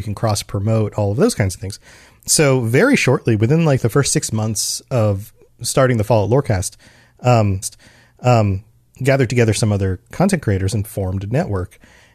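At 7.62 s there's a stream segment repeated: the player queued the same chunk twice, so roughly a second of speech, up to 8.62 s, plays again after a small blip at the jump back, right before "gathered together some other".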